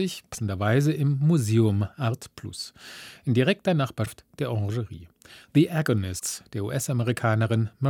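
Brief glitches where the speech jumps ahead occur at 0.33–0.35 s, 4.05–4.07 s and 6.18–6.22 s, likely a broken MP3 bit reservoir after frames of 24 ms were cut out.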